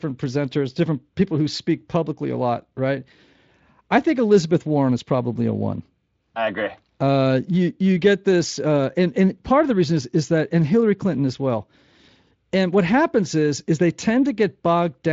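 No faults detected in the speech.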